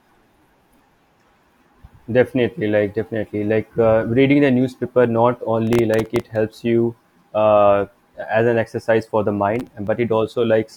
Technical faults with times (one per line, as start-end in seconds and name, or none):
5.67-6.36 processor overload crackle
9.56-9.87 processor overload crackle